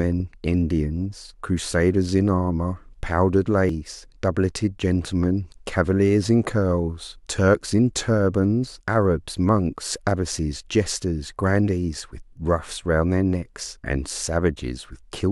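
Compressed frames skipped at 3.69 s in this speech recording: about two frames of roughly 93 ms each, around 200 ms of audio, never play, so the speech jumps ahead.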